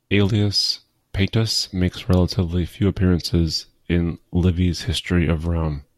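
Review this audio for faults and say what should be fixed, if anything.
No faults turn up in this audio, so nothing needs to be fixed.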